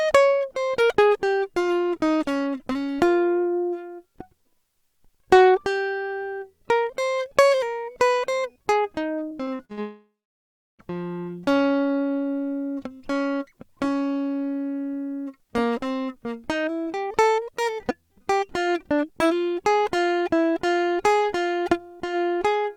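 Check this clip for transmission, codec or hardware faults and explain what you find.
Two transmission faults occur close together in this music.

From 9.29 to 9.79 s there is repeated packet loss with a robotic sound. Five short holes, the longest 42 ms, each get filled by stretching the preceding audio, so about 160 ms of music is replaced and roughly a third of that half-second is synthetic. The music turns choppy and robotic. On a spectrogram, brief smeared columns with flattened harmonics interrupt the texture. The waveform shows repeated, too-regular cycles at each patch.

From 9.81 to 10.81 s comes a long network dropout, likely caused by the connection stalling. Nearly a second of music, about 980 ms, is lost. The receiver first extends the last sound as a fading buzz or hiss, then about 690 ms of silence follows before the music resumes further along, with the missing passage gone. 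A spectrogram shows a decaying smear collapsing into a blank band. The waveform tapers to a flat line, then jumps back in abruptly.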